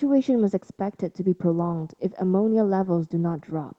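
Nothing stood out on listening to this speech, which sounds as expected for audio that has come through an ordinary call connection.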